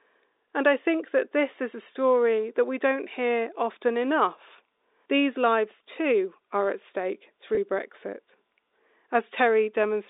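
Just after "too are at stake", from 7.55 to 7.57 s, a packet loss with pitch repetition fills a roughly 20 ms gap, which fits two lost packets. The last pitch period is looped, giving a brief buzzy hold. A spectrogram shows frozen, evenly spaced harmonics, and the waveform shows identical repeated cycles, all within the 300 to 3700 Hz telephone band of the G.711 coding.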